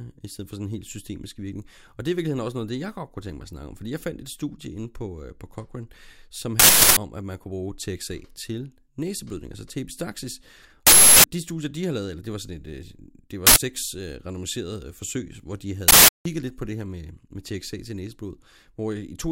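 A speech clip with four uninitialised buffer faults: 6.60–6.97 s, 10.87–11.24 s, 13.47–13.56 s and 15.88–16.25 s. Each is a loud burst of digital noise. Leftover memory played as samples. The 0.37 s bursts fit a 16384-sample buffer, the 0.09 s one a 4096-sample buffer.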